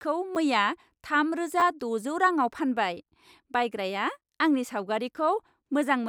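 At 0.35 s, a repeated buffer: playback ran out of fresh audio, so a 10 ms block played once more, giving a brief click. From 1.60 to 1.62 s, just before "द'जौ रांआव", the same block sounds two extra times, a short buzz-like stutter that fits a 10 ms buffer.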